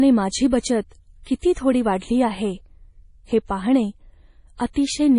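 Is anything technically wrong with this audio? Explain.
Yes. Heavy MP3 compression runs through the whole speech clip, likely from a low bitrate around 32 kbps, which fits the treble cut at 10.5 kHz and the watery, swirly texture. Pre-echo appears at 0.50–0.52, 1.23–1.26, 1.39–1.43, 4.57–4.60 and 4.73–4.76 s. Block-spread quantisation noise leaks ahead of sharp onsets, leaving 22–39 ms of hiss and smeared attacks.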